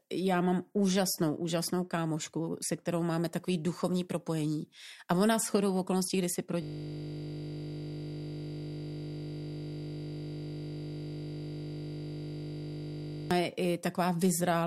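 After "v okolností kdy si", a system hang loop freezes playback at 6.62 s, cycling one 20 ms buffer into a steady 50 Hz buzz until 13.31 s.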